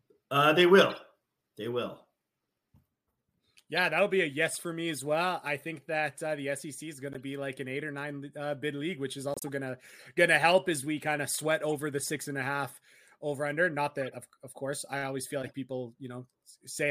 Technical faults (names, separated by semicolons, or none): corrupt frame decoded